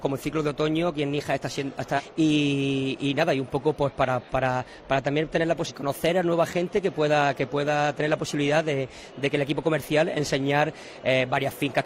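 At 1.94 s to 2.01 s and again at 5.65 s to 5.72 s, there are brief bursts of damaged data in a compressed stream, each lasting about 60 to 70 ms. In both places, corrupted bytes in the encoded file cause the decoder to misread the affected frames and lose synchronisation until it finds the next valid frame header. Each event is heard as a short chirp, squawk, click or brief hole that breaks into the surrounding sound.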